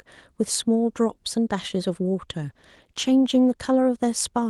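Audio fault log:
2.43–3.61 s, call bitrate drop: the speech turns coarse for about 1.2 s, bottoming out for roughly 1.1 s. The sound points to the call encoder being squeezed from around 32 kbps to 16 kbps, so Opus quantises the spectrum more crudely. On a spectrogram, the energy that reaches near 12 kHz elsewhere thins and smears in this span, with blurred harmonics. The waveform envelope looks largely unchanged.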